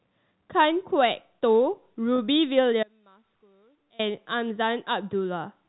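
At 2.16 s the receiver lost about 20 ms of audio, which fits a single dropped packet, and covered the hole with packet loss concealment by pitch repetition. It looped the most recent pitch period across the gap until about 2.18 s. The result is a brief held, slightly buzzy quality, where the sound seems to stick on one pitch for an instant instead of moving on. The gap is too short for the repeated cycle to fade.

From 2.83 s to 3.99 s, about 1.16 s, the signal most likely stopped reaching the path while the stages after the break stayed live. This shows up as an audio dropout to a faint residue. The sound cuts away abruptly rather than fading or pausing. Only a thin trace remains, about 30 dB below the normal level, until the full signal snaps back just as suddenly. Throughout, the G.711 A-law telephone band limit keeps everything below 4 kHz.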